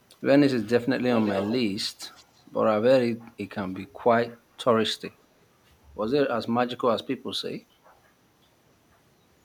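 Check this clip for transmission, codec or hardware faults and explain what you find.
There's an echo leak here, in two short bursts. From 1.13 to 1.56 s a delayed copy of the speech trails the original by 215 ms at around 10 dB down. From 2.02 to 2.24 s it returns at the same delay but much fainter, just a ghostly scrap. The likely cause is a loudspeaker on one side whose echo canceller didn't fully scrub what its mic picked up, so the remainder came back down the line.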